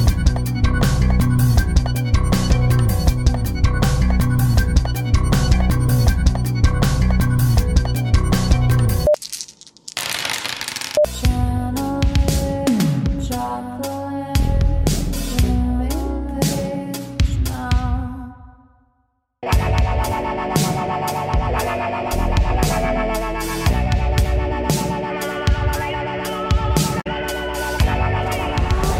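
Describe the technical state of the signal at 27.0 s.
At 27.0 s there's a brief bit of damaged data in the compressed stream, running from 27.00 to 27.07 s. The decoder hits corrupted bytes, can't read those frames properly, loses sync and hunts for the next valid header, giving a quick glitch.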